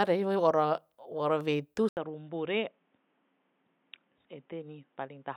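Speech that goes dull and boxy at 1.89 s, after an 80 ms gap, likely an input switched to a poorer device. From there the spectrogram is empty above 3.8 kHz, and the waveform sits roughly 10 dB lower over a faint new noise floor.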